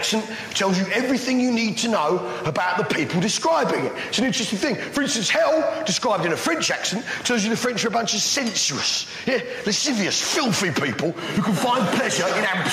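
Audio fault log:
Throughout: gain pumping. The gain swings by roughly 10 dB, so the level breathes in step with the sound itself. Loud and quiet passages sit unnaturally close together and the whole clip feels squashed. The likely cause is input gain set far too high for the microphone, with a fast limiter or compressor clamping down on each peak and releasing in between.
4.25 s: DC step. The waveform's zero line jumps suddenly, heard as a single low thump while the sound carries on unaffected. The shifted offset does not hold; it drains away gradually, in the manner of a high-pass around 2 Hz pulling the baseline back to zero. This points to an offset being switched in or a converter recalibrating at that instant.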